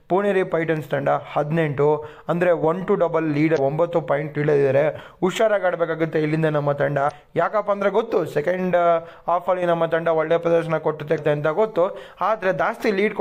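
Damaged data in a compressed stream leaves corrupted bytes that the decoder misreads, losing frame sync until it finds the next header. Each corruption is a brief chirp or blip of about 40 ms, at 3.54 to 3.58 s, 7.07 to 7.11 s and 11.14 to 11.19 s.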